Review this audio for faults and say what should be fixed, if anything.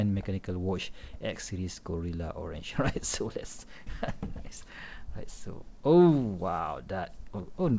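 No faults turn up in this audio, so nothing needs to be fixed.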